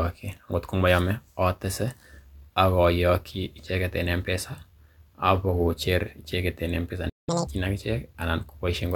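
At 7.09 s the speech cuts out in mid-flow and stays silent until 7.29 s, a gap of about 0.18 s. This playback stall is likely the player running dry of buffered data or its output thread being blocked, so nothing reaches the output until it recovers.

From 7.29 s to 7.47 s the player catches up at higher speed, running its backlog at 2.0 times normal rate by resampling. The speech sounds hurried and chipmunk-like, raised by roughly ten semitones, then drops back to normal speed and pitch.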